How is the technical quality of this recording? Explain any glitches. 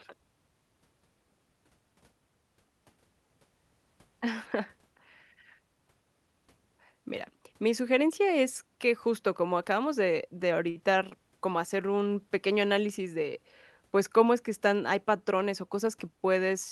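Two brief hiccups show up in the second half of the speech, both of the same kind. The call-codec band-limiting is present too, with high end rolling off around 12 kHz.

Short stall from a late packet, at 10.69 s and again at 11.09 s: a packet arrived late, the jitter buffer ran dry, and the receiver held the last sound, about 59 ms then 21 ms, before resuming where it left off. You hear a sound held slightly too long rather than lost audio.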